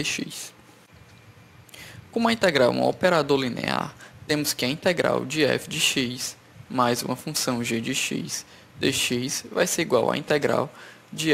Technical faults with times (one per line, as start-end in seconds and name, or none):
none